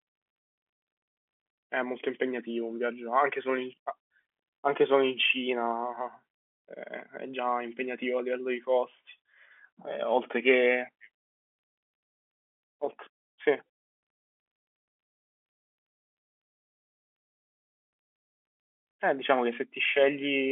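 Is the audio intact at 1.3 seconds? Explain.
Yes, the audio is intact at 1.3 seconds: nothing breaks, drops or distorts there, and the speech simply carries the narrow telephone-band sound of G.711 coding, with nothing heard above about 3.7 kHz.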